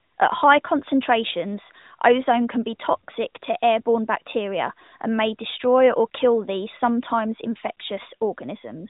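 Nothing's technically wrong with this bit of speech; there's no fault anywhere to point to.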